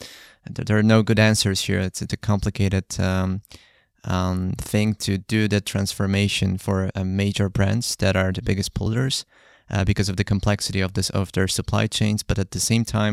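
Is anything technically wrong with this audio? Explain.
Yes. The speech has compressed frames skipped at 2.09 s, 6.90 s and 8.86 s. At each point, whole frames of the coded stream never reach the output, either missing or rejected as corrupt. Playback then jumps ahead in steps of the 26.1 ms frame length. The jump is about 50 ms at 2.09 s, which fits two frames, and about 70 ms at 6.90 s and 8.86 s, which fits three.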